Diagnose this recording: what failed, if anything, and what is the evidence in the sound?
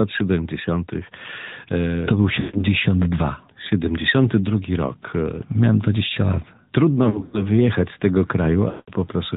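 Buzzy, synthetic, band-limited speech with nothing above 4 kHz throughout points to the codec stage: the AMR narrowband mobile codec, at a rate that fits its 10.2 kbit/s mode.

Sound smears, stretches and fades, then returns rough, at 2.40–2.65 s, 7.04–7.44 s (before "wyjechać z tego") and 8.70–8.92 s (after "wyjechać z tego"). These are lost AMR speech frames on the network: the decoder repeated its last parameters with falling gain.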